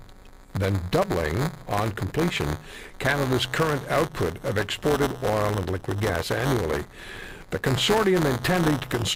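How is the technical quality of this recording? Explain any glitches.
The recording has buffer tearing for its entire length. The software filling the playback ring buffer and the hardware draining it have drifted out of step, so their positions cross inside every period. A small slice of each buffer, about 7%, still holds speech from roughly 10 ms earlier, spliced in with abrupt edges. That repeats at 188 Hz, which fits a 256-sample buffer, laying a steady robotic buzz over the speech that falls away in the silences.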